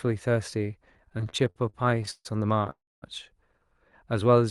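From 0.97 to 2.27 s the speech breaks into repeated stalls (stutter): nineteen brief hangs, the longest 141 ms, where the receiver's jitter buffer ran dry because packets came in late or slower than playback. Each hole is bridged by stretching the last sound, adding about 0.42 s in total, roughly a third of that stretch. Nothing drops out, so the speech drags and judders. What separates it from a freeze is the many short, closely spaced catches rather than one long halt.

At 2.70 s a single call audio freeze holds the sound for 0.32 s, until 3.04 s. The last sound carries on briefly as a fading buzz, then goes silent for about 0.25 s before the speech resumes exactly where it stopped. The likely cause is packets held up in transit long enough to empty the jitter buffer, pushing everything after it about 0.32 s later. Unlike the stutter, this is one clean gap that trails off into silence, not a chain of hiccups. 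Throughout, the audio carries the band-limited coding texture of the Opus call path, with its top near 12 kHz.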